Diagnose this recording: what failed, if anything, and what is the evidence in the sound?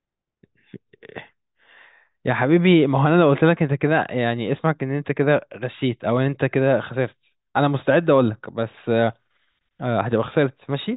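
Nothing failed; no fault is audible anywhere in this recording.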